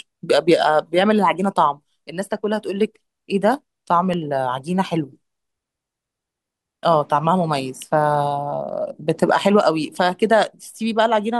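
At 4.13 s a sharp snap cuts across the speech. It peaks at about -15 dBFS and lasts only a couple of milliseconds. A second, quieter snap follows at 7.82 s, around -20 dBFS. Both sit on top of the speech rather than replacing it. This is an electrical switching spike, likely from a nearby switch, motor or static discharge arcing briefly. The audio line picked up each burst of arcing as a sharp snap.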